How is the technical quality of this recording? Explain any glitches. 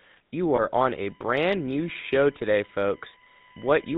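The technical quality is poor: the speech has been through a low-rate phone codec, one frame drops out early on, and an electrical whine runs through most of the clip.

The GSM full-rate codec affects the whole recording. At 13 kbps it models the voice with a vocal-tract filter driven by a sparse pulse excitation, which gives plainly audible buzzy, gravelly roughness. On a spectrogram, speech energy stops sharply at 4 kHz.

Lost GSM frames occur from 0.56 to 0.60 s, where one 20 ms frame went missing. The decoder repeated the previous frame's settings, so the sound briefly holds as a rough metallic ring. The waveform shows a short, smoothed, repetitive patch there.

USB whine starts at 0.76 s and runs to the end. Current drawn in 1 ms bus frames leaks in through power or ground, producing a steady 1 kHz tone with harmonics that are strongest at 9 kHz, roughly 20 dB below the speech. A spectrogram shows flat horizontal lines at those frequencies.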